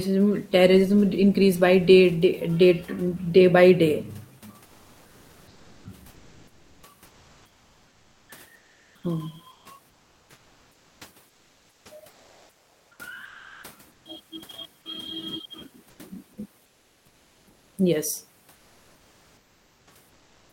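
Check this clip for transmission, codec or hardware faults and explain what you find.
Comfort noise in place of the background turns up in four pauses: 4.65–14.05 s, 15.89–15.99 s, 16.65–17.77 s and 18.55–20.53 s. The real room noise, about 39 dB under the speech, gives way to flat synthetic hiss, about 2 and 5 dB quieter in two of the gaps, most likely from Opus discontinuous transmission.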